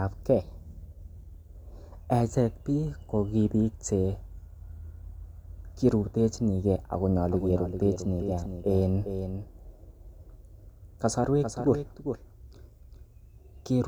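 From 7.21 s, after "cherutechini ge ago", a slower second path likely recaptures the speech: a doubled audio track, with a dry copy roughly 0.4 s behind, about 10 dB quieter, through the end.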